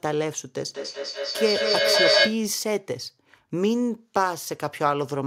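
Speech in which, from 0.68 to 2.45 s, each word returns about every fifth of a second, thinner and ringing, and the repeats build to about 5 dB above the speech. This is feedback echo between two devices: one device's microphone recaptures what the other plays, which no canceller removes.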